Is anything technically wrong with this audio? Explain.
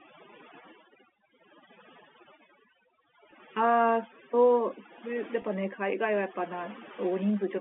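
Yes. Two faults can be heard in this speech clip, heard through a telephone-band channel of roughly 250 Hz to 3.5 kHz.

Overdone noise removal runs through the whole clip. The noise reduction was set too aggressively, so individual frequency bands near its noise estimate are pulled down or cut out entirely, and the quieter parts of the speech go with them. The background drops and breaks up into small twinkling specks, and the voice comes across with low-level detail stripped away.

Packet loss with pitch repetition occurs twice, at 3.31 s and from 5.42 to 5.44 s. About 10 ms of audio is missing at the first point and about 20 ms at the second, which fits one lost packet and then two consecutive lost packets. The receiver fills each gap by repeating the last pitch period. At these short lengths the concealment is heard as a brief held, slightly buzzy tone rather than a drop to silence, and the speech then resumes.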